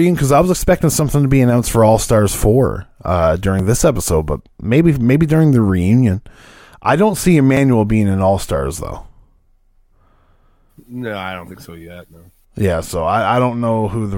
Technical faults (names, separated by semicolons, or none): audio missing between chunks